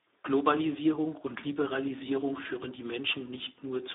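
From start to finish the speech carries Speex codec damage, and it is heavy: the CELP coder has too few bits to rebuild the excitation, so voiced sounds come out hoarse, grainy and edging toward robotic, which fits a low setting around 8 kbps. The line band runs only from about 250 Hz to 3.7 kHz. On a spectrogram, harmonics look smeared and noisy, the lowest frequencies are thin, and a hard ceiling leaves nothing above 3.8 kHz.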